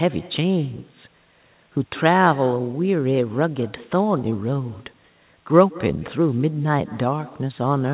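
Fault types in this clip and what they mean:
Echo with no canceller, throughout: the far end's loudspeaker feeds its microphone and nothing removes that pickup, so every phrase comes back around a fifth of a second later as a faint, thin copy, about 20 dB below the direct speech.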